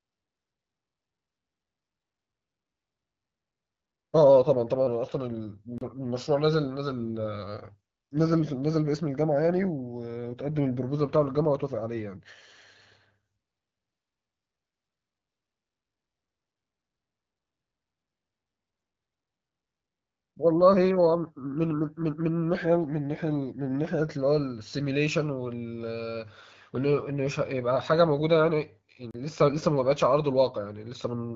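Two short holes break this speech clip, at 5.78 s and 29.11 s. Each is a 32 ms drop to dead silence. These are blocks of digital silence: the output buffer was likely not filled in time, so zeros were played, cutting in and out with no fade. The speech carries the light, band-limited character of AMR wideband (HD Voice) coding, consistent with a rate around 12.65 kbit/s.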